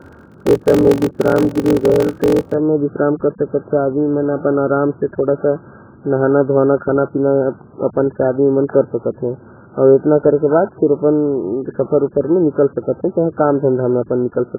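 From the start to 2.54 s the speech carries a block size mismatch (padded). One stage hands over blocks shorter than the next stage reads, which fits a 1024-sample read, and the shortfall is filled with silence. The result is a steady 46.9 Hz buzz, and the speech runs slow at 0.861 times normal speed with its pitch about unchanged. On the waveform, short near-silent gaps recur about every 21 ms. A spectrogram shows evenly spaced vertical stripes.

Throughout the whole clip the sound is dull, muffled and smeared, with a warbling, fizzy texture on sustained vowels and sibilants. The likely cause is heavy AAC compression, AAC-LC at what points to a very low bitrate of around 8 kbps. To save bits, the encoder lowers its cut-off and coarsely quantises what remains. On a spectrogram the energy stops at a hard ceiling, and the region below it looks patchy, with holes and blotchy fill.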